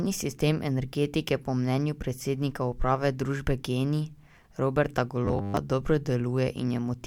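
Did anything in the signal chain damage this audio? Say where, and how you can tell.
Yes. From 5.25 to 5.57 s the speech becomes a rigid, metallic buzz locked at 100 Hz. This is robotic sound from repeated short buffers. The buffer stage likely starved and kept replaying about 10 ms of audio, so repeats replace most of that stretch.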